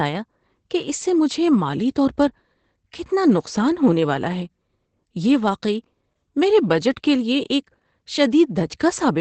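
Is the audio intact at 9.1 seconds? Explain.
No. At 9.1 s the speech carries Opus voice compression, present for the whole clip: the linear-prediction coder rebuilds the voice from a coarse excitation, leaving it hoarse and faintly robotic, which fits a bitrate near 12 kbps. Nothing sounds above 8.8 kHz, but unlike a plain low-pass, the voice itself is roughened, not just dulled.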